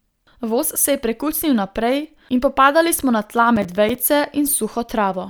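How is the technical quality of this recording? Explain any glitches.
The recording has one glitch, a burst of processor overload crackle from 3.56 to 3.95 s in the speech. During that stretch the processor couldn't finish its short audio buffers in time, and about ten deadlines were missed again and again across it. Each missed buffer was replaced with silence, leaving a tiny hard-edged dropout. The gaps are brief and closely spaced, consistent with buffers of around 5 ms, so they merge into a gritty, tearing crackle over the speech that stops once the load eases.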